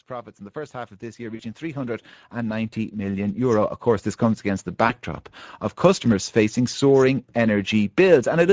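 Speex codec damage runs through the whole recording: the speech sounds noisy and hoarse, as the CELP coder has too few bits to rebuild the excitation accurately, which fits a setting around 16.8 kbps. The upper band reaches no higher than 8 kHz.

Automatic gain rising runs from 0.06 to 4.5 s. Having judged the input too quiet, the gain control lifts it gradually by about 15 dB, so the voice and the background swell together across those four-plus seconds.

VoIP packet loss concealed by the speech codec occurs at 1.35 to 1.42 s, covering roughly 40 ms of missing audio, and again at 4.87 to 4.94 s, covering about 20 ms. Each time, the decoder extends the last pitch and filter with falling gain, and the voice stays weakened briefly as packets resume.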